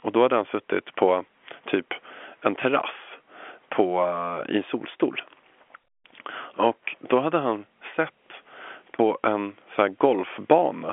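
Nothing goes wrong anywhere in this speech; it just carries the narrow band of an ordinary telephone line, roughly 250 Hz up to 3.4 kHz, the way G.711 telephone coding normally sounds.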